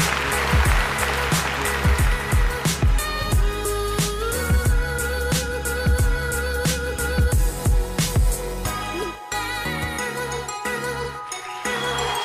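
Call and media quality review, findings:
Nothing to flag on this one: no dropouts, glitches or level problems anywhere in the capture, so no ticket entries are needed.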